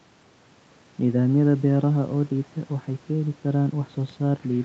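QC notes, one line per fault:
No faults to note in this speech clip.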